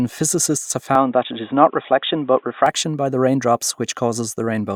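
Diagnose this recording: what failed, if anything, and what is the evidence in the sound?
The speech goes dull and narrow from 0.95 s, right after "physicists have", with nothing above 3.8 kHz, then clears at 2.66 s before "by the raindrops". The input was likely switched to a poorer device. A faint new noise floor and a different tone, with no gap or level jump, separate this from a codec's band-limiting.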